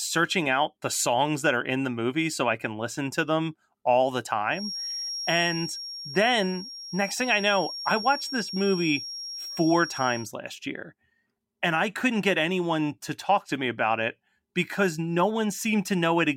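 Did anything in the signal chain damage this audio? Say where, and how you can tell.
Yes. From 4.48 to 10.32 s a thin, steady feedback whistle near 5.6 kHz sits around 10 dB under the speech, swelling and fading slowly in level. A loudspeaker-to-microphone loop held just below runaway is the likely cause. Unlike mains hum, it's one high tone, not low harmonics.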